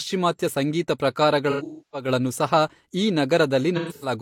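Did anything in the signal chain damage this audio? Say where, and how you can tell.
Yes, AAC frame loss with concealment at the codec stage, from 1.50 to 2.08 s and again from 3.76 to 4.13 s. The speech turns smeared and noisy. In the first stretch, about 0.38 s of audio is missing, and a run of roughly 0.3 s sags toward silence before the signal fades back. That fits about nine lost frames. The second gap loses about 0.21 s. The decoder patched each hole from the last good spectrum with scrambled phase and fading energy.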